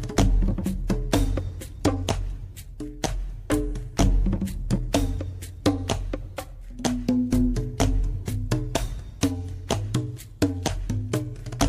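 Nothing stood out as a fault on listening to this recording.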